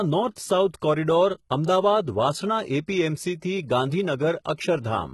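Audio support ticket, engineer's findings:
Likely HE-AAC compression, heavy damage, throughout; sound fits a bitrate around 16 kbps. Treble not coded but rebuilt by spectral band replication from lower bands, so upper harmonics misalign. Result: gritty, metallic, lispy s sounds; nothing above 11.8 kHz.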